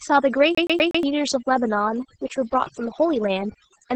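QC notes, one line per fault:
throughout, overdone noise removal: A noise reduction stage was set far too aggressive, so every frequency band that dipped near its noise estimate was pulled down hard or shut off entirely, taking the quieter parts of the speech along with the hiss. The background collapses to near silence dotted with twinkling specks where isolated bands flicker on and off, and the voice loses its softer edges and breath.
throughout, Opus voice compression: The speech was squeezed through Opus in its SILK voice mode at a very low rate, which fits around 10 kbps, with the band held to wideband and nothing above about 8.6 kHz. The linear-prediction coder has too few bits to describe the excitation, so it is coded coarsely and the damage is heavy: the voice sounds muffled at the top, hoarse and faintly robotic, with a grainy roughness where the residual is starved.
0.55–1.03 s, CD stuck on one turn: Playback jumped back to the same point on each turn of the disc, as a scratched CD does when the laser is kicked back a track. 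A slice of about 0.12 s replays four times in a row, each repeat separated by a brief mute at the jump. The result is the rapid, perfectly even stutter of a skipping CD, the sound locked in place before playback moves on.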